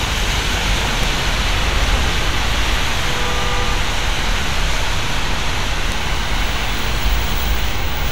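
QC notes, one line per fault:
1.04 s, bit error spike: a single sharp tick, two samples long, peaking at about -6 dBFS. A flipped bit throws the sample value up by a power of two for an instant before it snaps back, so the click is broadband and has no relation to the surrounding sound.
5.92 s, bit error spike: the same kind of tick, this time three consecutive samples, again at about -6 dBFS, heard as one abrupt, full-spectrum snap.
6.79 s, bit error spike: a two-sample tick reaching about -12 dBFS, so softer, but equally instantaneous and detached from the signal.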